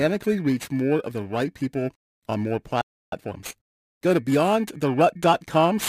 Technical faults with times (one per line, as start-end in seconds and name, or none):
0.00-5.89 periodic clock jitter
2.81-3.12 playback stall
3.12-4.34 time-compressed catch-up